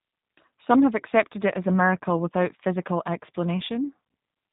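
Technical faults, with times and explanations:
Throughout, G.729 codec: band-limited, slightly rough, synthetic-sounding speech with nothing above 3.8 kHz, from low-bitrate model-based coding, which fits roughly 8 kbit/s.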